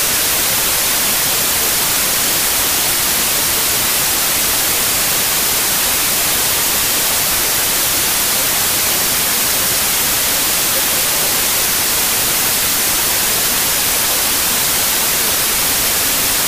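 From start to finish the sound suffers a wrong sample width: packed 24-bit data read as 32-bit, so each value mixes bytes from neighbouring samples and it plays 1.33 times fast. Unlike a plain sample-rate error, loud hiss buries the sped-up original.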